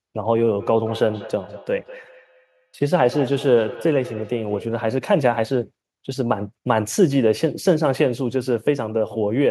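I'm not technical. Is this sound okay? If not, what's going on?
No. From 0.6 to 4.76 seconds there is feedback echo between two devices: two devices in the same room seem to be on one call, and each microphone picks up what the other plays. The speech comes back roughly every fifth of a second, sounding thinner and more tinny each time. Ordinary room echo blurs the sound into a smear, but here you hear separate, evenly spaced repeats of the same speech.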